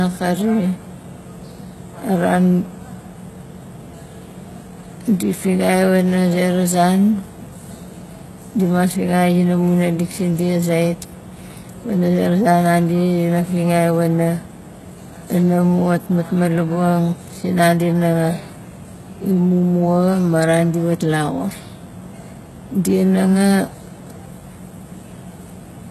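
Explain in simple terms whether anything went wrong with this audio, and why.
Yes, something's off, and it runs through the whole recording rather than hitting at one moment. The speech sounds heavily squashed: the s sounds come out gritty and a bit lispy, with a metallic sheen up top, and nothing at all comes through above about 12.3 kHz. That points to HE-AAC compression as the likely cause. It keeps only the lower part of the sound properly and fakes the treble by copying lower bands upward, so the brightness is there but it doesn't quite match the real thing.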